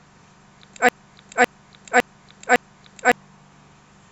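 A broken-record loop runs from 0.89 s to 3.12 s. A fragment of speech about 0.56 s long plays four times in a row, each repeat identical and butted tightly against the last, so the phrase stutters mechanically instead of moving forward. The likely cause is a stall in the player, encoder or stream that kept resending the last chunk it held. Whatever speech belonged in those two-odd seconds is gone.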